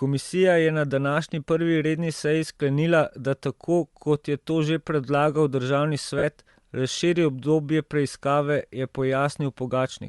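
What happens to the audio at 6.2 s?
From 6.18 to 6.24 s, about 45 ms, there are lost LE Audio frames. That span fits six consecutive 7.5 ms frames going missing over the Bluetooth link. The decoder fills the gap by repeating the last good spectrum with randomised signs. The result is a brief noisy smear in place of clear speech.

Underneath, the whole clip carries a grainy, breathy edge in the upper frequencies. That texture is likely Bluetooth LC3 compression. The codec strips parts of the high band and fills them with noise. The damage is plainly audible and fits a rate near 48 kbps with 7.5 ms frames. The concealed gap at 6.2 s sits on top of that coloured sound.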